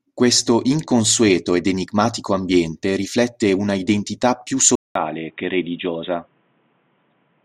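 At 4.75 s, after "riflette una identità più", a 200 ms gap, then quieter, duller speech capped at 3.7 kHz: likely an input switched to a poorer device. Spectrograms show a flat ceiling.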